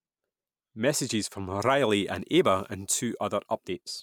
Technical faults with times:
1.60-3.68 pre-emphasis left on

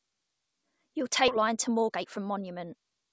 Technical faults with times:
1.28-1.30 skip ahead
1.41-3.12 jitter buffer speed-up

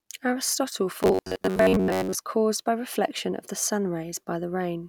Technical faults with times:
1.03-2.15 robotic sound from repeated short buffers

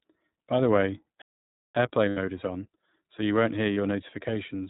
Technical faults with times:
0.00-4.70 iLBC codec
1.22-1.75 playback stall
2.09-2.18 lost iLBC frames
3.75-3.77 lost iLBC frames

